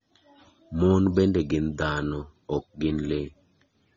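AAC compression runs throughout the speech, plainly audible as a dull, smeared top end with a warbling, fizzy texture on sibilants and held sounds. The likely cause is low-bitrate AAC-LC coding, around 24 kbps, which lowers the cut-off and leaves gaps in the spectrum.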